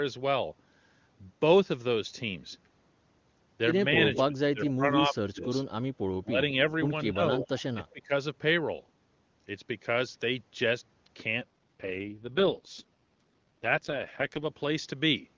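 Echo leak at 4.14 to 4.21 s, 4.67 to 4.71 s and 7.42 to 7.48 s: brief, faint repeats of the speech arrive roughly 225 ms behind the original, sitting some 10 to 15 dB under it. They are short scraps rather than a sustained echo. This is likely a far-end loudspeaker feeding its own microphone, with the echo canceller failing to subtract all of that pickup, so remnants were sent back down the line.

Speech suppressed in double talk from 4.28 to 5.49 s, then at 6.23 to 6.38 s, 7.12 to 7.38 s and 7.73 to 8.12 s: the speech level sags and parts of it fade away. The longest stretch loses around 0.7 s of its span to the dips, sinking by as much as roughly 25 dB. The later dips are shallower, nearer 15 to 20 dB. The likely cause is an echo canceller treating overlapping talk as echo and attenuating everything.

AMR rate drop from 11.41 to 14.46 s: the AMR-WB codec steps down from 23.85 to 6.6 kbit/s. 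The bandwidth holds and nothing cuts out, but the speech turns rough, raspy and synthetic, because the lowest mode describes the vocal tract and excitation far more coarsely. A weak radio link pushes the network to request this rate so more bits go to error protection, and clarity returns once 23.85 kbit/s resumes.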